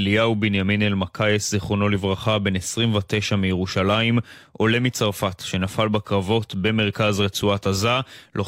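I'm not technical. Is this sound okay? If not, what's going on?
Yes, nothing in the recording's signal points to a technical problem anywhere in it.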